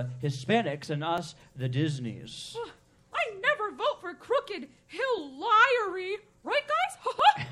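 From 1.18 s to 7.20 s, periodic USB or driver dropouts recur every 2.0 s, each skipping roughly a millisecond of audio and producing a regular tick.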